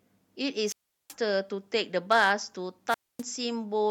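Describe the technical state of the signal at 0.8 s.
At 0.8 s the speech sits inside a wireless microphone squelch dropout running from 0.66 to 1.14 s. The radio signal faded, hiss rose briefly, then the receiver's squelch muted the output for about 378 ms, leaving a hole of near silence before speech resumed.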